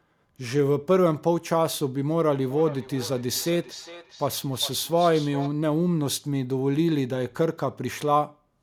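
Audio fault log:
2.32–5.55 s, feedback echo between two devices: speech returns at a fixed interval of roughly 400 ms, peaking about 15 dB below the direct voice and thinner and more ringing on each return. That fixed spacing sets it apart from room reverberation's smooth decay.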